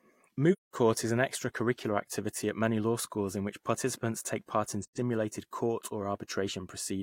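AAC frame loss with muting at 0.52–0.75 s, just before "is an extracurricular activity", and at 4.83–4.98 s, right after "participants take part in", leaves two soft-edged gaps in this speech clip. The first lasts about 0.21 s, which fits five lost frames, and the second about 0.13 s, which fits three. The decoder zeroed the missing spectra, so the overlapping windows fade the sound out and back in.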